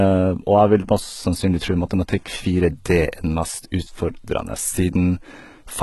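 HE-AAC compression runs through the whole clip, with heavy damage. The speech is likely coded at a very low bitrate, around 16 kbps, so only the lower spectrum is properly encoded and the treble is rebuilt by copying lower bands upward under a coarse envelope. Nothing remains above 11.8 kHz. The synthetic top end doesn't line up harmonically with the real lower bands, so s sounds come out gritty and lispy and the brightness has a metallic, artificial sheen.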